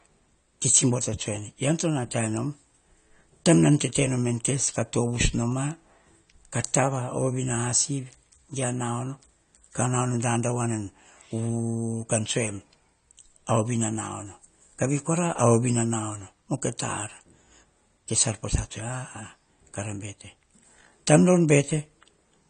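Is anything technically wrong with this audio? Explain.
Yes. Throughout, the sound shows AAC compression, likely a low-bitrate AAC-LC encode around 32 kbps, whose coarse quantisation discards detail and lowers the cut-off, leaving nothing above 9 kHz. The speech sounds dull and smeared, with a warbling, fizzy texture on sibilants.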